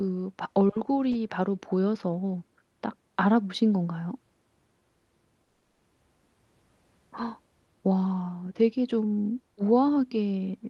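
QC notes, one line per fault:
5.43 to 5.82 s, long network dropout: the speech breaks off and is replaced by a buzzy, hiss-like continuation of the last sound for roughly 0.36 s that fades away, followed by a brief silence of about 30 ms before the speech resumes with the gap's content simply absent. The likely cause is a run of lost packets, with the receiver's concealment stretching the final good audio until it gives up, over a call path whose high end tops out near 12 kHz, consistent with Opus.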